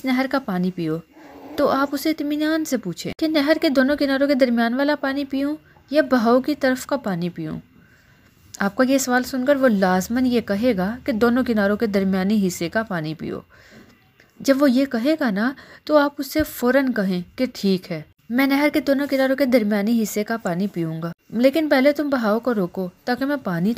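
Dropped samples at 1.74 s: a single sharp click, visible as a thin vertical line across the spectrum. A fraction of a millisecond of the stream is likely missing there, so the waveform jumps abruptly to a later value, too brief to remove any audible sound.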